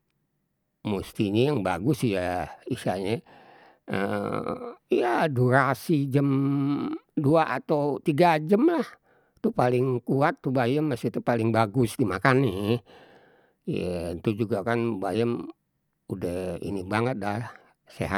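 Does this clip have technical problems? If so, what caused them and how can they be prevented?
No, there are no technical problems in this clip.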